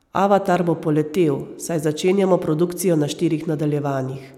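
No technical faults can be heard in this speech recording. Nothing in the audio calls for a time or a description.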